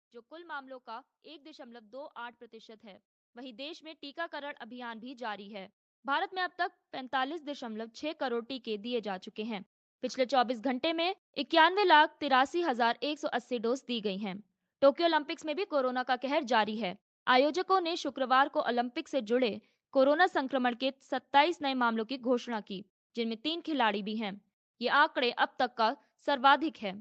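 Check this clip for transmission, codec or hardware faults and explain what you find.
One fault stands out: automatic gain rising from 0.28 s to 11.12 s. The gain control raised its level by about 20 dB, so speech and background swell together. The waveform envelope widens steadily, and the spectrogram brightens overall. Content stopping near 8 kHz reflects the call path's bandwidth.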